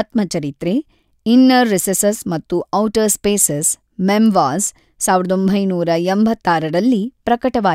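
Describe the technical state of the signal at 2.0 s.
At 2.0 s the speech signal is intact, with no technical fault audible at that point.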